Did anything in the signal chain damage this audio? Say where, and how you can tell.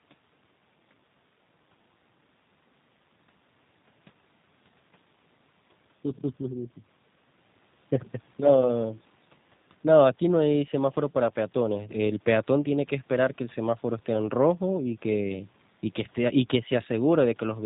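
Yes. The damage is at the codec stage, and it runs through the whole clip rather than at any one time. The speech has the plainly audible signature of G.729 coding: nothing above 4 kHz, and a slightly rough, synthetic texture. The coder rebuilds each 10 ms frame from a vocal tract filter, a pitch predictor and a few sparse pulses. That low-rate parametric approach fits roughly 8 kbit/s G.729A.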